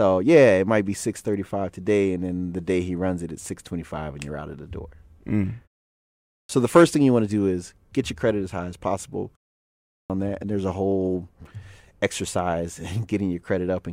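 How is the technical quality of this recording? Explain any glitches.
The recording has one recurring glitch, a clipped start after a pause, heard twice. At 6.06 to 6.49 s, after about 0.47 s of quiet, and at 9.64 to 10.10 s, after about 0.36 s, the output device has dropped into a sleep state and needs time to wake. The first 0.43 s and 0.46 s of speech are lost, so each phrase bursts in abruptly without its opening sounds. On a waveform, the trace jumps from a flat line straight to speech level. A spectrogram shows energy beginning at a hard vertical edge with no gradual onset. In the pauses themselves, the background drops to silence between phrases.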